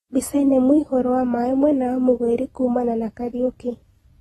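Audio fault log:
throughout, AAC compression: the speech was likely squeezed through an AAC-LC encoder starved of bits, so its hearing model threw away whatever it judged least audible and band-limited the signal, leaving nothing above 12.4 kHz. The damage is plainly audible: the speech sounds dull and smeared, with a watery, fizzy texture on sustained sounds and sibilants where coarsely quantised frequency bands shift from frame to frame. The amount of damage points to a bitrate of around 32 kbps.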